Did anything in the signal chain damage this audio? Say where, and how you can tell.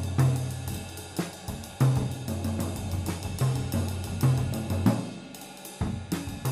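No, nothing in the chain audibly damaged this audio.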